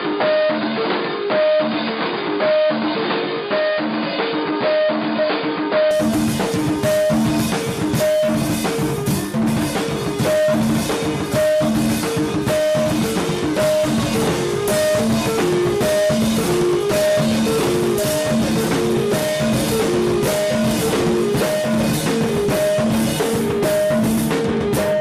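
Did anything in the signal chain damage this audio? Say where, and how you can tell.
Yes. Until 5.91 s the audio sounds dull, with nothing above 4.8 kHz and faint added noise, then clears abruptly: the input was likely switched to a poorer device.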